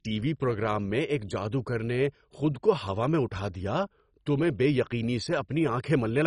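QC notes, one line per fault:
Throughout: MP2 compression, heavy. The speech sounds dull and has nothing above 10.4 kHz, with a gurgling, granular texture and upper bands that flicker in and out. The likely cause is MPEG Layer II coding starved of bits, in a range that fits roughly 32 kbps. The encoder splits the signal into 32 sub-bands, drops the top ones entirely, and quantises the remaining bands coarsely, producing that grainy, swirling distortion.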